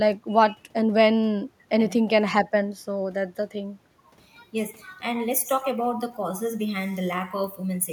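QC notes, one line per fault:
throughout, echo with no canceller: every phrase of the speech is trailed by a faint copy of itself arriving around a fifth of a second later, about 28 dB below the direct signal. The far end is playing the call through a loudspeaker that its microphone hears, and no echo canceller strips that pickup out, so the talker's own audio returns after the network round trip as a quiet, thin shadow.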